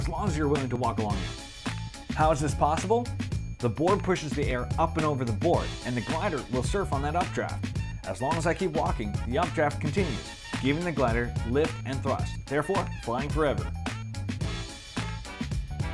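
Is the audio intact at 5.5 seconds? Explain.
Yes, at 5.5 seconds the audio is intact, with no dropout, click, distortion or other fault at that point.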